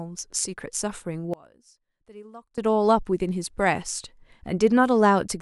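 One channel inverted, from 1.34 to 2.58 s: the speech collapses by about 26 dB into a faint residue. This is likely one stereo channel flipping polarity, so the centred content common to both sides cancels when they are summed to mono.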